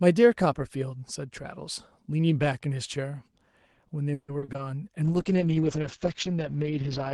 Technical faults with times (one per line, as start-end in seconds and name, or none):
4.13-4.60 repeated packet loss (robotic sound)
5.05-7.14 call bitrate drop